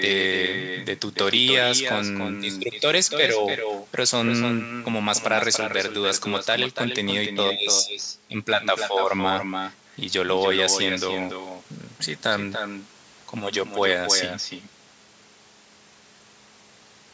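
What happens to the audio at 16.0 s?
At 16.0 s the speech is shadowed by a quieter, thinner copy trailing about a third of a second behind, as it is throughout the clip. This is echo with no canceller: the far end's loudspeaker feeds its microphone, returning the talker only about 7 dB down.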